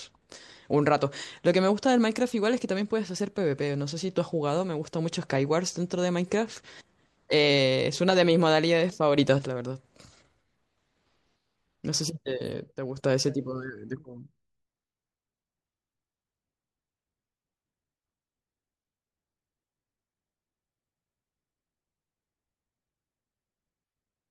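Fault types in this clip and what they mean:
Sudden gain jump: The level steps abruptly rather than ramping, likely from a gain setting applied between one sample and the next. At 9.17 s the speech rises by about 6 dB for roughly 0.21 s, and at 12.76 s it drops by about 8 dB for a similar span, with the background noise shifting along with it. A waveform shows a squared-off step in the envelope, and a spectrogram shows a vertical brightness change across all frequencies at once.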